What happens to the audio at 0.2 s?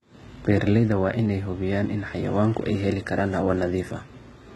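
At 0.2 s the speech carries heavy codec damage that runs through the whole clip, most likely HE-AAC compression at a rate that sounds like roughly 16 kbps. Only the lower spectrum is truly coded. The treble is rebuilt by copying lower bands upward, so s sounds turn gritty and lispy. On a spectrogram the upper region shows blocky, repeated-looking patches with misaligned harmonics above the crossover, and nothing at all above 11.8 kHz.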